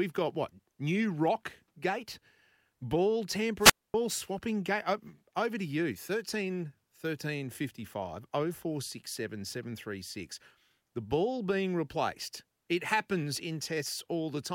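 It's a speech clip with one wireless microphone squelch dropout, running from about 3.58 to 3.94 s, just before "swapping gate". You get a quick swell of hiss as the FM radio link fades, then the receiver's squelch kicks in and mutes the output for roughly 0.25 s, leaving a hole of near silence before the signal comes back strong enough to open the squelch and the voice returns.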